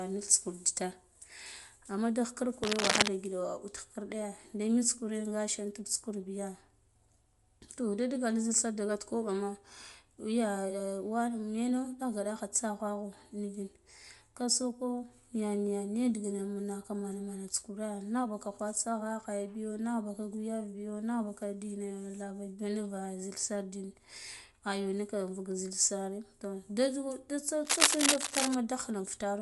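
Speech throughout carries a grainy, noise-filled top end with nothing above 11.5 kHz, likely Bluetooth LC3 compression in 10 ms frames at a rate consistent with about 48 kbps. Cable scratch noise, dense uneven rustling roughly 5 dB above the speech, appears from 2.63 to 3.09 s just after "amma da khikirn" and again from 27.65 to 28.55 s, probably from a worn cable or connector being moved.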